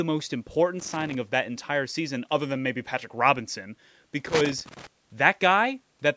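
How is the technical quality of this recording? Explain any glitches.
Two bursts of loose connector crackle break into the speech. The audio has also passed through call microphone processing, so nothing above 8 kHz is present. The crackle runs from 0.79 to 1.15 s and again from 4.26 to 4.87 s. A worn or dirty contact intermittently makes and breaks as it shifts, chopping the signal on and off. The result is an irregular, scratchy crackle over the sound.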